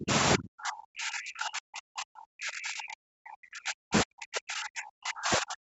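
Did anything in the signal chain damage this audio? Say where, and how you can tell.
Yes. Speech plunges by roughly 35 to 40 dB at 0 to 0.12 s and from 0.36 s onward, likely speech suppressed in double talk by the call echo canceller.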